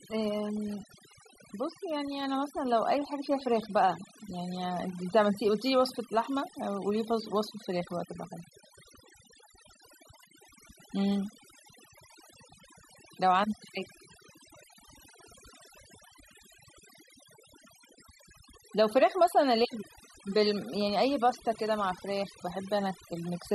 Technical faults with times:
0.00-23.55 overdone noise removal

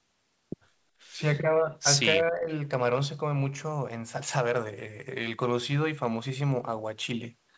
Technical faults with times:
2.13-2.49 speech suppressed in double talk

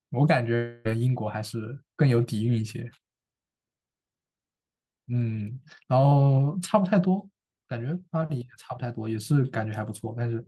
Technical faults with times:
0.55-0.87 long network dropout

